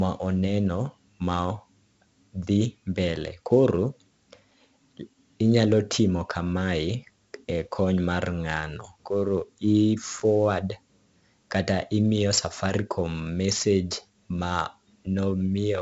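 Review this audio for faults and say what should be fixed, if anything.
A gritty hiss rides on the speech from start to finish, swelling with every loud syllable and roughening sharp onsets, and nothing is heard above 7.7 kHz, so the sound is also dull. This is heavy 4-bit ADPCM compression: each sample is coded as a coarse 4-bit step from a prediction, so the error tracks the signal level, and the step size adapts too slowly to follow fast attacks. The band limit and grain fit a 16 kHz sample rate at about 64 kbps. To prevent this, record and deliver the speech as linear PCM at 44.1 or 48 kHz, or use a modern codec at an adequate bitrate.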